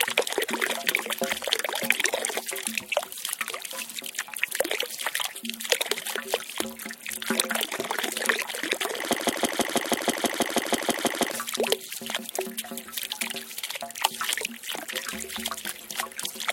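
At 9.13 s the audio locks into a broken-record loop: a fragment of about 162 ms repeats back to back 14 times, identically each pass, until normal playback resumes at 11.32 s. The effect is a rapid, mechanical stutter at roughly six repeats per second. The likely cause is a stall in the player, encoder or stream that kept resending the last buffered fragment, so the sound that belonged in that stretch is missing.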